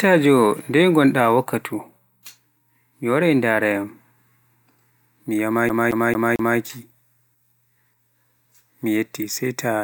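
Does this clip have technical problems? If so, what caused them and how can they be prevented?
Yes. From 5.69 to 6.58 s the speech hits a CD stuck on one turn: a 223 ms slice plays four times in a row, each pass cut by a brief mute as a scratch knocks the laser back one track at the same point of every rotation. On a waveform this shows as four identical blocks separated by tiny gaps; a spectrogram shows the same pattern repeating like wallpaper. Cleaning or replacing the disc, or ripping it with an error-correcting drive, prevents this.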